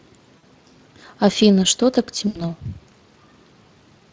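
Throughout, the speech carries plainly audible Speex codec damage: a hoarse, grainy roughness where the CELP excitation lacks detail, which fits a setting around 20 kbps. On a spectrogram the harmonics look smeared and speckled rather than cleanly striated.

From 0.37 to 0.44 s, and again from 2.27 to 2.41 s, VoIP packet loss concealed by the speech codec appears. The decoder stretches its last pitch and filter into a fading buzzy tone or coloured noise, likely three and four lost frames. The spectrogram shows a flat, repeated pattern. The waveform shows a decaying envelope.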